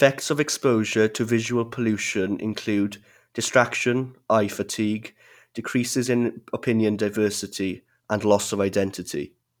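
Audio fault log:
No fault can be heard anywhere in this speech recording. There is nothing to log at any time or range.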